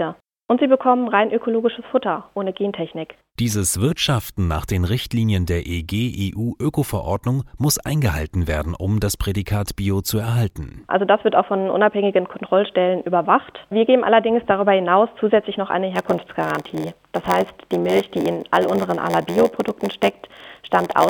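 From 15.95 s to the end, a block size mismatch (padded) sets in. Each block comes up short and is filled out with silence, which fits a 512-sample read buffer. This adds an 86.1 Hz buzz. The sound also runs slow, at 0.938 times speed, with timbre unchanged.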